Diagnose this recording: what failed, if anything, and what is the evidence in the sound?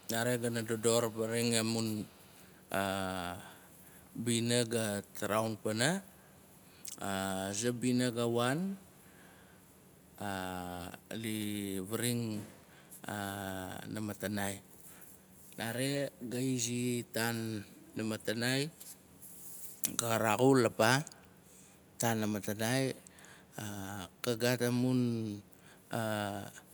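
Echo leak in the call processing. Faint copies of the speech trail by 285 ms, about 30 to 35 dB down, at 0.0–0.09, 0.39–0.82, 1.09–1.22, 1.94–2.51 and 6.41–6.46 s. A far-end echo canceller likely passed loudspeaker pickup back. Spectrograms show weak harmonic duplicates shifted right.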